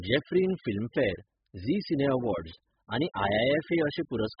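Speech with nothing above 5.1 kHz throughout, plus a smeared, warbling, fizzy texture on sustained sounds and sibilants. That points to AAC compression, likely AAC-LC at around 8 kbps. A plain low-pass filter would dull the top without the warble.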